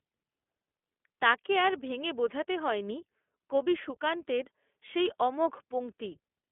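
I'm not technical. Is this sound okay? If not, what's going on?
No. Throughout, the speech passes through the iLBC codec, an internet-calling codec. It cuts everything above 3.7 kHz and codes each 20 ms slice separately. Unlike a plain phone line, it sounds clearly rough and synthetic.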